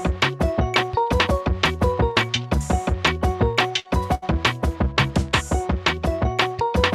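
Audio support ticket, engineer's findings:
Burst of packet loss at 3.79–3.88 s. Receiver concealment fills 52 ms by extending the last sound, fading it down, then resumes with 60 ms of audio missing. Burst of packet loss again at 4.15–4.38 s. 72 ms concealed, 60 ms missing. The held tail fades before playback jumps ahead. Probable component is the network path feeding the jitter buffer. Packets are lost or arrive too late to be played.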